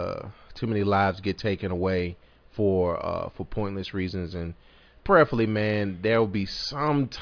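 Nothing in the recording stood out as a technical fault on careful listening.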